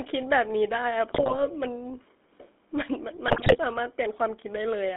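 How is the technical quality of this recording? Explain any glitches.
Pretty rough, honestly: the whole thing has gone through a GSM phone path, and there are two bursts of corruption on top.

Throughout, the GSM full-rate codec gives the speech that buzzy, gravelly edge. The codec rebuilds the voice from a vocal-tract filter fed by a coarse pulse excitation, so fine detail goes missing. The line is narrow, roughly 250 Hz to 3.6 kHz, which fits the old 13 kbps coder.

From 1.14 to 1.43 s, and again from 3.28 to 3.58 s, GSM bit errors break things up. Corrupted filter, pitch and gain values reach the decoder, so the spectrum warps and the level jumps frame to frame, giving squawks, pops and a gargly texture.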